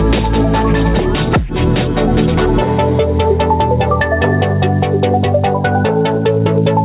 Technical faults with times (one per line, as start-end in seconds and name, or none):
0.00-6.84 gain pumping